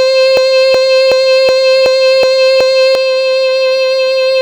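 At 0.37 s the music locks into a broken-record loop. A fragment about 372 ms long plays back to back, exactly the same each time. It repeats seven times and the loop ends at 2.95 s. Each pass has the same stutter. No new material comes through. The player or stream likely stalled and kept resending the last fragment it held. The music that should have filled those seconds is lost.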